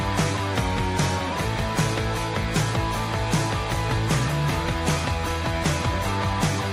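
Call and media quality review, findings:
Sound drops flat and slows, 0.54 to 1.32 s. Pitch down about 107 cents, roughly a semitone. Speed down 6%. Snaps back at 1.32 s. Likely a drift correction step in clock-matching resampler. Playback rate lowered in one step to refill buffer, shifting speed and pitch together.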